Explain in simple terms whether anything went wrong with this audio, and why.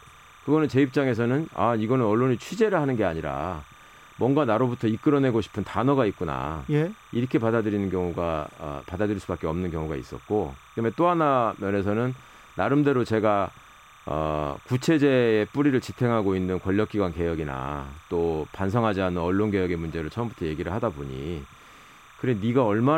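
A faint, steady chirping warble runs behind the speech throughout. This is timecode bleed: a high-pitched sync signal leaking in from a neighbouring track or cable.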